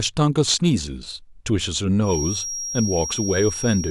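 A feedback whistle runs from 2.0 s to the end of this speech clip: a thin, steady 5.6 kHz tone about 10 dB under the voice, likely from a loudspeaker-to-microphone loop held just short of runaway.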